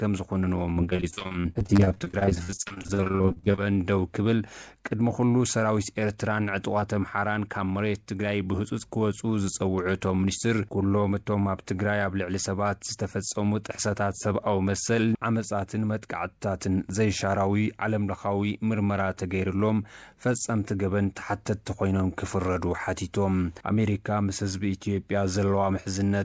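From 0.74 to 3.6 s the audio breaks into repeated packet loss, giving a choppy, robotic sound. Dozens of short holes, none longer than about 48 ms, are each patched by extending the preceding sound, so roughly 40% of that stretch is concealment rather than real signal.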